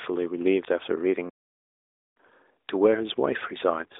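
At 2.28 to 2.30 s, lost AMR speech frames: one 20 ms frame was concealed by replaying earlier pitch and vocal-tract settings, giving a brief dip or warble rather than the hard silent gap of a true dropout, within narrowband audio limited to roughly 300 Hz–3.7 kHz.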